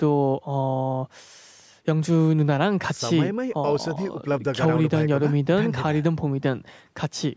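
Nothing stood out on listening: the speech has the ordinary character of a call microphone path, with the lowest bass trimmed and nothing above 8 kHz, and no fault could be heard anywhere in it.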